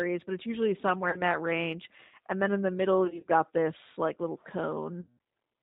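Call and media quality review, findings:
G.729 codec across the whole call: low-rate speech coding, the sound pointing to about 8 kbit/s G.729A. Plainly audible damage: nothing above 4 kHz, speech dull, slightly rough and synthetic, since it is rebuilt from a vocal tract filter, pitch predictor and sparse pulses.

VoIP packet loss concealed by the speech codec, 1.10–1.22 s: about 30 ms lost; decoder extrapolated from last pitch and filter, briefly smearing the sound into a buzzy tone or coloured noise. 3.05–3.25 s: 120 ms lost, scattered over 200 ms, runs up to 30 ms; repeated stretched, fading fragments, voice weak as decoder state recovers. 5.01–5.17 s: 170 ms lost; longest drop-out, concealed sound fades, then distorted restart.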